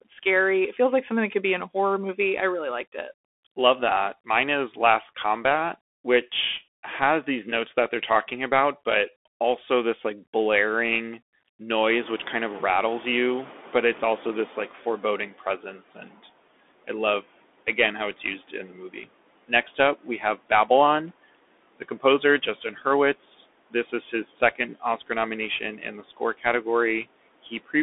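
The whole clip runs through a Bluetooth CVSD headset codec, which fits a 64 kbps link. Nothing gets through above about 3.8 kHz, there's a granular hiss under the speech, and the s sounds come out scratchy.

The noise suppressor artifacts also run throughout. The background is pulled down by about 17 dB between words and comes back up under them.

At 11.89 s the room noise jumps by about 21 dB, starting around 12 s. The noise suppressor is catching up until 15.33 s. At first it only takes about 12 dB off, then it settles over roughly 3.4 s.

From there the suppressor starts cutting speech, at 15.33–16.21 s, 18.23–20.7 s (right after "again how it's"), 21.79–22.86 s and 23.7–26.66 s. Bits of speech drop by about 14 to 17 dB and sound swallowed.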